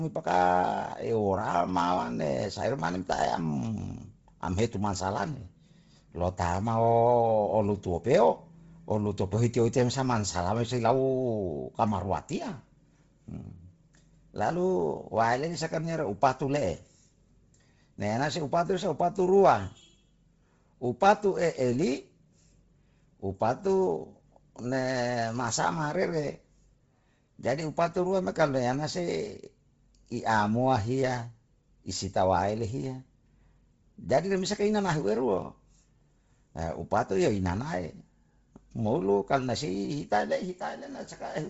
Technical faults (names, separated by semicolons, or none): Bluetooth LC3 compression